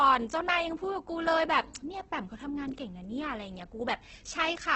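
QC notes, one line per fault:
throughout Opus compression: the audio was likely encoded with Opus in its music (CELT) mode at a very low rate, which fits a rate near 12 kbps, and the band was narrowed to wideband, so nothing is heard above 8.4 kHz. With so few bits, each band keeps its overall energy but loses its fine detail, which is filled with copies of lower bands or with noise. The damage is heavy: the speech sounds rough, grainy and hissy, and dull at the top.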